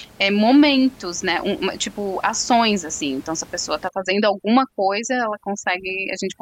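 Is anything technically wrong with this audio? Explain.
Yes. From 3.89 s to the end at 6.42 s there is overdone noise removal: heavy band-by-band suppression strips away the room noise, about 25 dB below the speech, along with quiet speech detail, leaving twinkling near-silence. A spectrogram shows a speckled, hollowed background.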